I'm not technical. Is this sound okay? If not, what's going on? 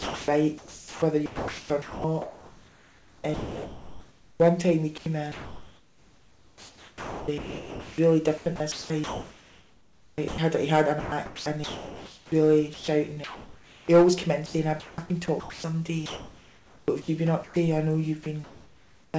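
No. The sound keeps cutting in and out, and the pauses are filled with artificial hiss instead of the real room sound.

The main problem is sound chopped by the voice detector, in four stretches: 0.0 to 4.4 s, 5.0 to 10.4 s, 11.0 to 13.9 s, and 14.5 to 17.6 s. The sending side likely has a detector that decides moment by moment whether anything worth sending is present. Here it kept switching on and off, so quieter parts of the sound were swapped for filler noise. About 3.5 s of the first stretch and 4.2 s of the second were lost, with roughly 1.8 s and 1.6 s in the later two. This is what makes it choppy and flickery.

Near the end, at 18.24 s, there is sound dropped by the voice detector. The detector likely treated the sound as background and stopped sending, so a brief moment, about 20 ms, vanished into noise. Unlike the chopped stretches, which flicker repeatedly, this is a single short dropout.

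From 18.24 to 19.14 s you hear comfort noise in place of the background. Most likely, while nothing was being sent, the listening side filled most of that gap, about 0.7 s, with a smooth, even hiss that only roughly matches the real surroundings. It is a steady, featureless fill rather than a cut in the sound, and any detail in the real background disappears.

The clip also passed through a call connection that removes everything above 8 kHz, which makes it sound duller than full-range audio.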